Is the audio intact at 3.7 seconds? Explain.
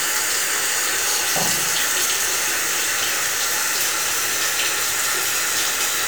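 No. From 3.67 to 3.72 s there are overlapping chunks: a new 2.5 s chunk starts before the previous one finishes, so about 50 ms of sound plays twice, heard as a brief stutter. Unlike a dropout, nothing goes missing; material repeats instead.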